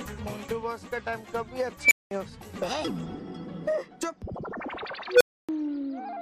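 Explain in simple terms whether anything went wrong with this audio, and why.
An unstable filter breaks the sound twice. At 1.82 s a high squeal swells for under a tenth of a second, clips, then cuts to 0.2 s of silence. At 5.12 s a lower beep does the same, with 0.28 s of silence. A faulty processing step fed its output back until it overflowed.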